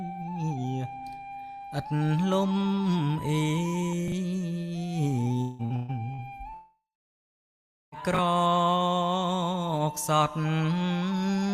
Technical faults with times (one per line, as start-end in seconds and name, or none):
4.08-4.12 chunks out of order
5.41-6.21 repeated packet loss (robotic sound)
6.54-7.95 long network dropout
8.14-8.18 chunks out of order